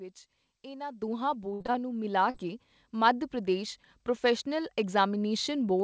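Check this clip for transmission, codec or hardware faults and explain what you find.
Three faults are audible in this speech clip, carried over a call path whose G.722 coding leaves nothing above 8 kHz.

At 1.02 s the microphone volume is stepped up by about 9 dB. Call software raised the input gain at once, so voice and background jump together.

From 1.54 to 1.76 s there is repeated packet loss, with a robotic sound. Audio kept arriving late or not at all. Each hole was patched by extending the last sound. Over half the stretch is filled this way, and the longest gap is about 60 ms. It sounds choppy.

From 2.30 to 2.36 s there is short concealed packet loss. About 40 ms never reached the decoder. The receiver continued the previous sound and blended back, leaving a brief smear.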